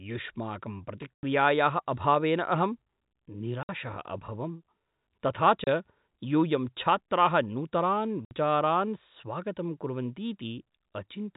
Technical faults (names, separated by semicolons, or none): packet loss filled with silence